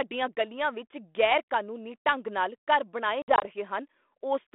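From 3.22 to 3.46 s the call suffers packet loss on an ADPCM call: around five packets vanish, 100 ms in total scattered across 200 ms, with the longest gap 60 ms. Each hole cuts to silence with hard edges, showing as flat gaps in the waveform and blank vertical strips on the spectrogram. The 32 kbit/s G.726 decoder's predictor and step size lose track of the sender's, so sound resumes with brief distortion before settling.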